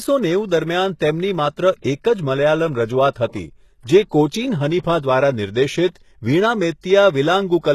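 Throughout the speech, the audio was likely encoded with HE-AAC at a very low bitrate, consistent with about 16 kbps. Treble above the core band is synthesised from copied lower bands, so sibilants sound gritty and metallic, and nothing remains above 12.3 kHz.

Pre-echo occurs at 1.82 to 1.84 s, spreading 27 ms, and at 4.79 to 4.84 s, spreading 56 ms. In each case the codec smeared quantisation noise across its block, so a short hiss leads the sharp onset and blunts it.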